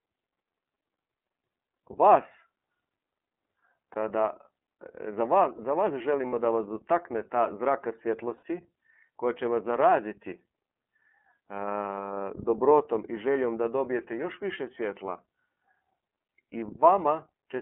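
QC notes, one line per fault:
Throughout, iLBC codec: The speech is band-limited, clear but slightly rough and synthetic, with nothing outside roughly 250 Hz to 3.4 kHz. The codec models each 30 ms frame's excitation independently at low bitrate, which fits iLBC's 13.33 kbps mode. That coarse modelling produces the plainly audible grain, and the narrowband line removes the low bass and all the upper air.
3.93–3.97 s, 6.27–6.34 s, 8.37–8.43 s, lost iLBC frames: Three brief spots where the sound freezes into a held, faintly buzzy, breathy vowel before the speech snaps back. The second falls just after "za vas" and before "da vas dotakne". The decoder filled missing packets by repeating the last pitch cycle mixed with noise. The gaps fit one lost 30 ms frame at 3.93 s and two frames, 60 ms, at the later spots. Since iLBC frames stand alone, recovery is immediate.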